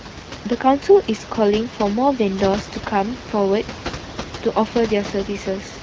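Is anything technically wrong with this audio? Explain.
No, nothing in this speech clip is technically wrong. A room noise sits about 12 dB below the speech, and the speech carries the light, slightly band-limited character of the AMR wideband (HD Voice) codec, which fits its clear 12.65 kbit/s mode.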